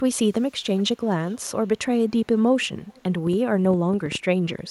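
From 0.41 to 0.52 s, 0.78 to 0.83 s, 1.04 to 1.51 s and 2.85 to 3.03 s, an echo leak brings back a faint copy of the speech 344 ms late. It is about 40 dB down in the first scrap and about 30 dB down after that. Unlike room reverberation, it is a distinct repeat in short scraps rather than a smooth tail. It is likely caused by a far-end loudspeaker whose echo canceller let part of the pickup through.

From 3.27 to 4.6 s, a train of clicks adds roughly ten sharp ticks, about 6.8 per second but unevenly spaced, peaking a little above the speech level. They are heard in pauses too and look alike from one to the next. That sets them apart from the echo, which follows the speech, and from random crackle. They likely come from electrical interference or a faulty connection or power supply.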